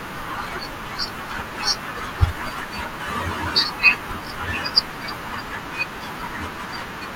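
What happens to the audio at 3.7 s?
Nothing goes wrong at 3.7 s; the speech continues cleanly through that moment with no dropout, click or distortion.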